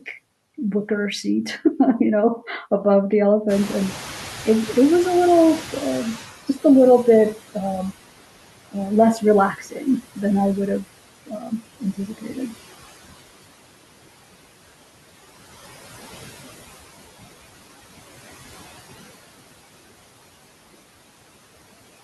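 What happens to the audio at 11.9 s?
Speech cut by the noise suppressor spans 11.26 to 12.54 s, covering 11.9 s. The suppressor misreads parts of the speech as steady background and turns them down along with the noise, by up to about 15 dB. Roughly half a second in total is affected across that stretch, so soft consonants and word endings sound swallowed or faint, as if they drop away from the rest of the sound.

Noise suppressor artifacts run through the whole clip, including this moment. Frame by frame, the suppressor lowers every band it judges to be steady noise, cutting it by about 17 dB. The room noise, which rises noticeably around 3.5 s, therefore dips between words and swells back under them. What remains of it can warble or flutter.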